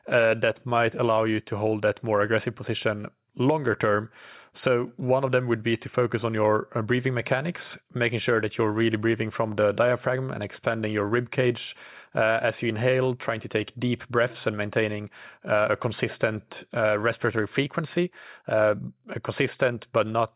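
Nothing in the speech stood out as a technical problem on listening.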